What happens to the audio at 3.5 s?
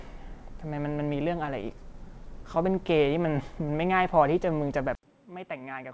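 Right around 3.5 s you're in the middle of a jitter buffer slow-down running from about 3.26 to 4.65 s. The receiver's buffer was running short, so it padded things out by repeating single pitch periods and slivers of pauses over and over, adding roughly 110 ms. The speech plays at about 92% speed with the pitch unchanged, so sounds get a little drawn out, with maybe a faint warble where the repeats stack up.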